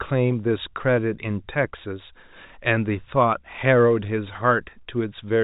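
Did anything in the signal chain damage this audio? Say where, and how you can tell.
No, nothing in the chain has damaged this speech recording. It has gone through G.711 telephone coding, which you can hear in the way the band stops at about 4 kHz and in a faint hiss that rises and falls with the speech.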